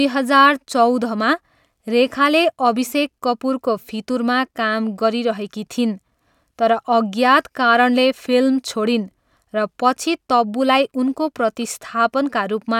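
No technical faults can be heard anywhere in the recording.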